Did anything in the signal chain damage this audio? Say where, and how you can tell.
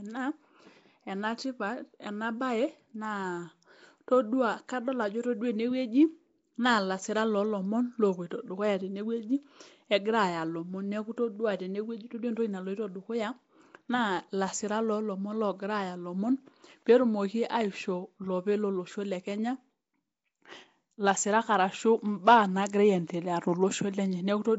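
Yes, at the codec stage: the speech carries a rough, hissy halo and a smeared, underwater quality from start to finish, with nothing above 7.7 kHz. That points to Nellymoser compression, likely Flash's Nellymoser Asao at about 32 kbps, where starved bands are refilled with noise.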